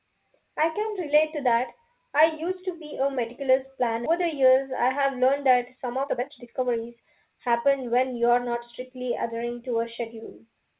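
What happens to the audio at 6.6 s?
The jitter buffer held too much audio and trimmed pitch-period slices, a jitter buffer speed-up from 4.16 to 8.62 s, so the speech runs about 13% fast at unchanged pitch, sounding hurried.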